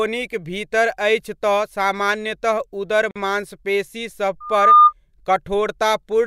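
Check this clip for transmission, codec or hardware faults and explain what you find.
Two faults turn up in this speech clip: a silent gap where separately encoded pieces were joined, and a burst of loudspeaker feedback.

From 3.11 to 3.16 s there is a gap at a join of encoded pieces. The audio was encoded in sections and spliced without removing each run's start-up delay and final-frame padding, so that dead time remains. The result is a 46 ms hole in the speech with smeared edges, after which the sound picks up exactly where it left off.

From 4.40 to 4.93 s there is a loudspeaker feedback squeal. A microphone was picking up the loudspeaker it was driving, and at 1.2 kHz the loop gain rose above one, so that frequency fed on itself. It is heard as a pure 1.2 kHz tone that swells over roughly a third of a second into a squeal standing around ten decibels above the speech.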